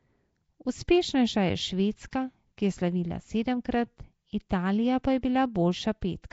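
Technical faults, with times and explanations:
Throughout, Nellymoser compression: speech sounds rough and smeared, with a hissy halo and nothing above 7.7 kHz, likely from noise-filled starved bands in a 32 kbps stream.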